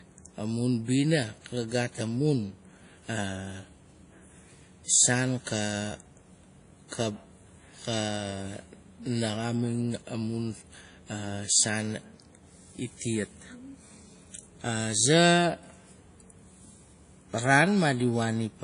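Speech, likely first squeezed through a low-bitrate codec and then re-encoded at a high bitrate: low-bitrate audio saved at a high bitrate. Throughout, nothing above 10.1 kHz survives, a cut-off the larger second encoding cannot restore.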